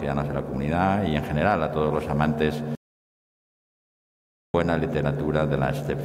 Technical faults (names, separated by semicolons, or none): audio dropout to silence